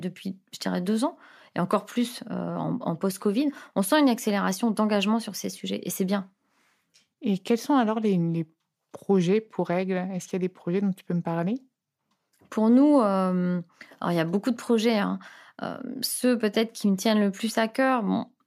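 Nothing stood out as a technical fault on listening to this recording.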